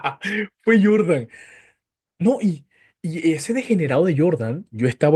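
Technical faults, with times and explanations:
No technical faults can be heard anywhere in this speech recording, and the signal holds together as a continuous, intact whole.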